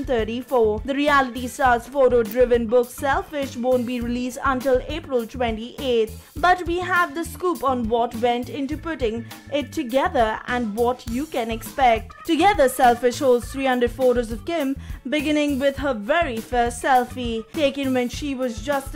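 At 11.08 s there's an electrical switching spike, a single sharp snap sitting on top of the sound and peaking at around -10 dBFS. It's likely a nearby switch, motor or static discharge arcing briefly, with the audio line picking up that burst.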